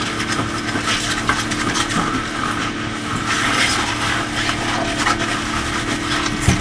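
No technical fault is audible anywhere in the recording.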